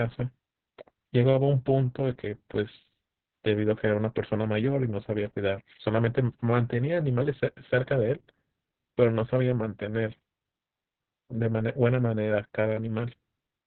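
From start to finish the speech has passed through Opus voice compression at a very low rate, which points to roughly 6 kbps with long 60 ms frames. The codec has fallen back to its SILK linear-prediction coder in narrowband, so nothing survives above 4.4 kHz, and the excitation is coded very coarsely. The result is heavily muffled, telephone-like speech with a hoarse, buzzy edge and a slightly robotic quality.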